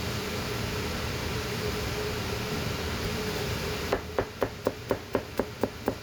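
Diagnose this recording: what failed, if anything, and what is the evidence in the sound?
Nothing failed; no faults can be heard anywhere.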